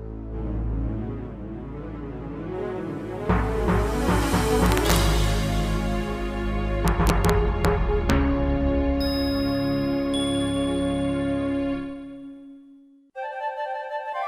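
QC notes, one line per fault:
4.66–4.96 s, 6.88–7.30 s, 7.65 s and 8.10 s: integer overflow. Loud peaks pushed about 3, 2, 1 and 0 dB over full scale wrap straight to the opposite sign instead of being limited, so you get violent cracks far harsher than ordinary clipping.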